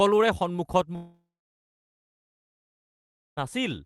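Speech cut by a long network dropout from 0.95 to 3.39 s, likely from lost packets: a brief fading buzz, then about 2.1 s of silence, seen as a flat waveform and an empty spectrogram gap.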